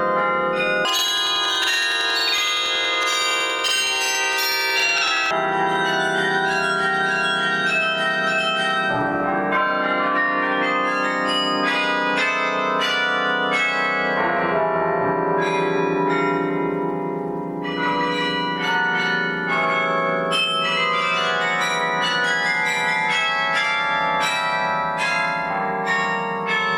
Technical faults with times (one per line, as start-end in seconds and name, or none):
0.85-5.38 planar audio read as interleaved